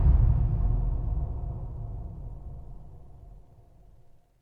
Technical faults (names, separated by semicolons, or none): call bitrate drop